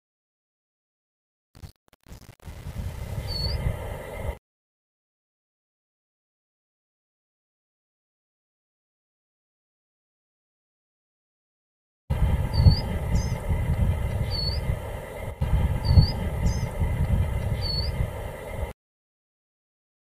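From 0.0 to 3.46 s there is truncation distortion on a fade. The fade was processed digitally with only about 7 bits of resolution and no dither. Quiet parts of the waveform fall onto a few coarse square steps instead of a smooth curve. The error follows the signal rather than sitting underneath it as steady hiss. The sound turns gritty throughout this stretch, with the worst of it spanning the whole fade.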